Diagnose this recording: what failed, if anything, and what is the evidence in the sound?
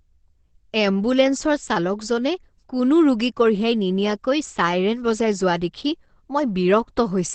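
The codec stage is where this went wrong. The whole clip, start to finish, sounds muffled and hoarse, and the top end stops dead at about 8.4 kHz, which gives that wideband-phone feel. That's most likely heavy Opus compression. At a rate this low, around 12 kbps by the sound of it, the encoder drops out of its music mode into its speech-oriented SILK path, which models the speech coarsely and throws away everything above the narrowed band.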